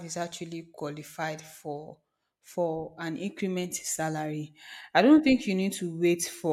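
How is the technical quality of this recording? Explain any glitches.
No glitches or technical faults can be heard anywhere in the recording.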